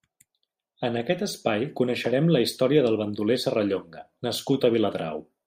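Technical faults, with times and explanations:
There are no technical faults to list with times or explanations.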